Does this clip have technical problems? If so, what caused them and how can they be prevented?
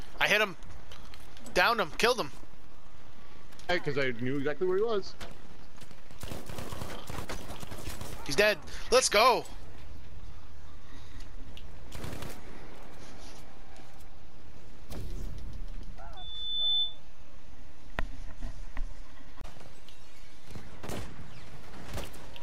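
Yes. A loudspeaker feedback squeal runs from 16.17 to 16.99 s: a single tone at 3.5 kHz swells over roughly half a second to about 5 dB above the surrounding sound. A microphone was picking up a loudspeaker it fed, and at that frequency the loop gain exceeded one, so the tone reinforced itself. On a spectrogram it is a bright horizontal line at 3.5 kHz; the waveform's envelope swells. Lowering monitor gain, notching 3.5 kHz, or separating microphone and loudspeaker prevents it.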